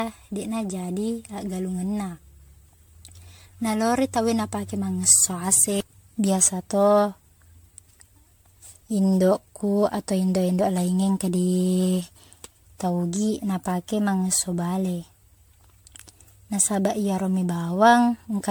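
Repeated lossy re-encoding has likely degraded this speech recording throughout: it sounds as if it went through MP3 about fifteen times at a rate near 98 kbit/s. Each pass requantises on a shifted frame grid, so artefacts pile up. The result is generation loss: a swirly, hollow, smeared texture worse than one encode at that rate would give, blurred consonant attacks, and nothing above 19.9 kHz.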